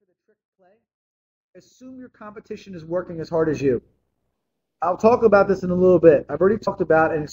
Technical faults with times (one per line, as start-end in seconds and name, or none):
6.62-6.68 damaged data in a compressed stream